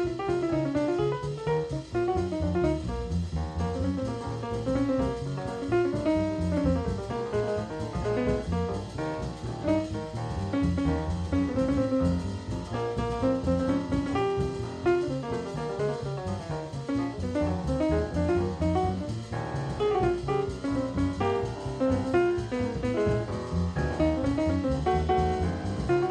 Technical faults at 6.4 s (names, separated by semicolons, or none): none